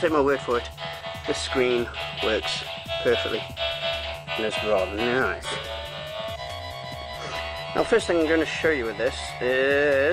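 Nothing stood out on listening; no technical problem could be heard at any point in the audio.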